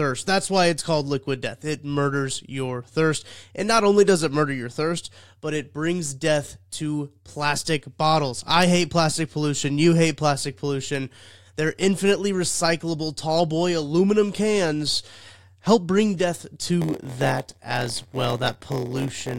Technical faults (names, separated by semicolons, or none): block size mismatch (padded)